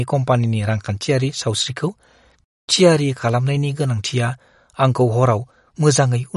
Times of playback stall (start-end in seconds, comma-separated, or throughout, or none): 2.44-2.68